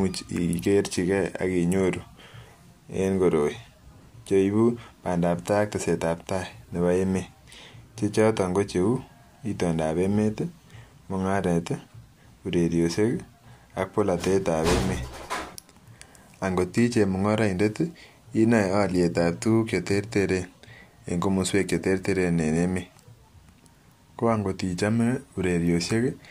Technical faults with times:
none

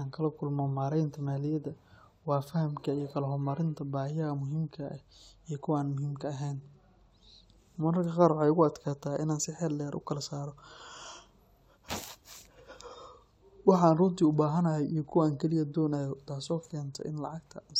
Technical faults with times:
none

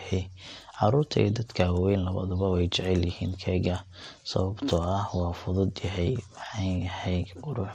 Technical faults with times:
0.00-7.74 MP2 compression
1.15-1.30 DAB burbling

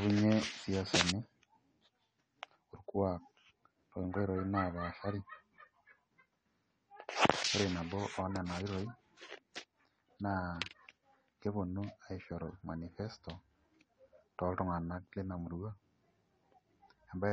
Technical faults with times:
0.00-17.32 AAC compression

